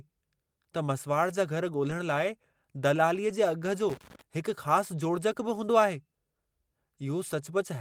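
Lost packets rebuilt from error correction appear twice in this speech recording, at about 1.89 s and 3.29 s, each a brief 20 ms patch that fits a single lost packet. The following packet carried a low-bitrate backup copy of the missing audio, and the decoder played that copy instead of leaving a gap, so nothing drops out. Those two short stretches sound coarser and noisier than the surrounding audio. Loose connector crackle runs from 3.90 s to 4.22 s, a burst of irregular scratching and crackle lasting about a third of a second. It comes from a worn or dirty contact that rapidly makes and breaks as it shifts, chopping the signal on and off.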